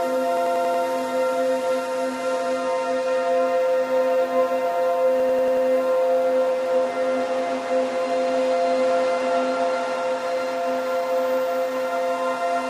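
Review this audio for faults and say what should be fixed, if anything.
A system hang loop occurs twice, from 0.37 to 0.84 s and from 5.20 to 5.67 s. Each time, a 92.88 ms slice of sound repeats exactly five times, giving a machine-gun stutter at 10.8 Hz. This happens when the driver or host stalls while the audio hardware keeps replaying its ring buffer, and the loop length fits a 4096-sample buffer. Unlike a dropout or underrun, there is no silence or gap, and essentially no audio seems lost. The repeats are sample-identical and locked to a steady rate. To prevent it, keep the audio thread at real-time priority and track down whatever is blocking the driver.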